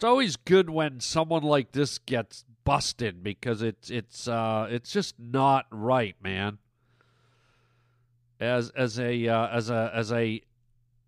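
Speech recording with no technical faults heard anywhere in it.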